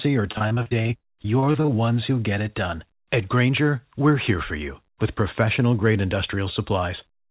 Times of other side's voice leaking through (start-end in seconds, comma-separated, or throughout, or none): none